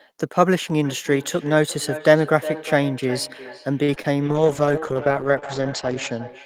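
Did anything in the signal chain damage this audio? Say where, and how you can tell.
Yes. Four kinds of damage are audible, all in the call path.

Feedback echo between two devices starts at 0.84 s and runs to the end. Each stretch of speech returns roughly every 0.4 s, thinner and more ringing each pass. The loudest repeats sit about 13 dB below the direct speech. This is a call-processing failure. A second device in the room plays the call aloud, and the first microphone captures it again. That device's echo canceller only removes its own playback, so the loop survives.

A short stall from a late packet occurs from 3.83 to 3.90 s. A sound is held about 48 ms too long, with a slight buzz or dip. Nothing is skipped afterwards. This is a network fault. A packet arrived late, the jitter buffer ran dry, and the receiver stretched the last sound until the data came. Playback then resumed from the same point, which added 48 ms of delay.

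Short concealed packet loss follows at 3.94 to 3.98 s and again at 4.02 to 4.06 s. Each is a brief smear or wobble where about 20 ms of audio never arrived. This is also the network stage. The decoder filled each hole by extending the preceding sound, then blended back into real audio. Anything in those gaps is gone, not delayed.

A call bitrate drop begins at 4.27 s and lasts until 6.35 s. The speech turns rough and muffled, and the top end disappears. This stage is the codec. The bandwidth estimate fell, and the encoder went from 32 kbps to 9 kbps, staying at the lowest rate for 1.81 s. At that rate the coded bandwidth shrinks from 20 kHz to 8 kHz. Coarser quantisation adds the watery texture.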